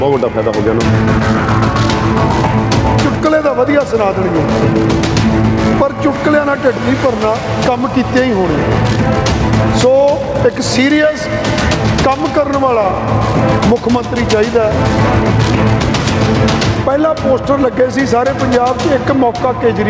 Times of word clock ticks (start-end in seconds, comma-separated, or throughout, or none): none